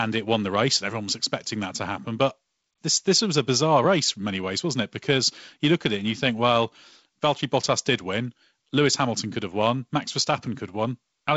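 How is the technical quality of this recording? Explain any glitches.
The recording shows no glitches and has the sound of G.722 wideband telephone coding at 48 kbit/s, with the coder's light graininess on the speech and no content above 7.7 kHz.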